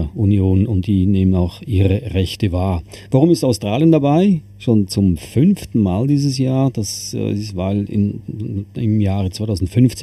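Channel delay produces comb filtering throughout. One channel lags about 0.4 milliseconds. Summed to mono, notches fall evenly from near 1.5 kHz, sounding hollow.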